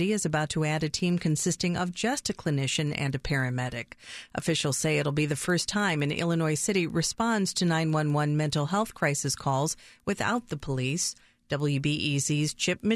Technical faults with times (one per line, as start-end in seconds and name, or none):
0.00-12.95 resampler restarted on every block